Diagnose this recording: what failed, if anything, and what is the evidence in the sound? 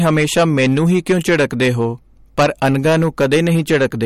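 Hard clipping runs through the whole speech clip, at the converter or an earlier gain stage. The signal is driven about 10 dB past full scale, so a small share of samples, around 7 percent, hit the ceiling and flatten, adding harsh upper harmonics as fuzz on loud syllables.

MP3 compression is the likely cause of the watery, swirling texture present throughout, with smeared consonant attacks and nothing above 16.5 kHz. That fixed treble cut-off and the frame-to-frame flicker of weak frequency lines fit a starved encoder running near 51 kbps.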